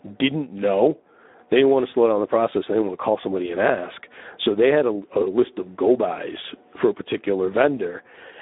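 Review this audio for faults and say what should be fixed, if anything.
Speex codec damage throughout: the speech sounds hoarse and noisy, band-limited to 250 Hz–3.7 kHz with nothing above 3.8 kHz, consistent with a starved excitation at roughly 11 kbps. Use a higher Speex quality setting or a wideband codec.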